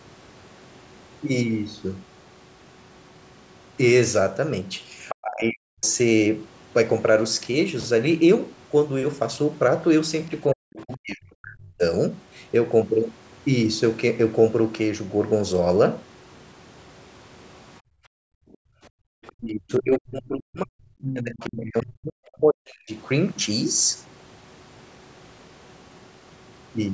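An echo canceller likely failed to fully remove the loudspeaker signal from the microphone, so the other side's voice leaks through in brief scraps at 5.09–5.15 s (fairly loud against the talker), 19.27–19.32 s (faint) and 21.4–21.46 s (somewhat louder than the second).

During double talk, the canceller likely could not separate the talker from the echo and suppressed both. The speech is pushed down at 5.22–5.86 s, 10.53–11.83 s and 19.35–22.91 s, at worst nearly to silence, and comes through dipped and broken.

From 17.8 to 19.07 s the echo canceller gates the background while the loudspeaker plays. It clamps the microphone down by up to about 40 dB, so the room sound drops out for roughly a second before returning.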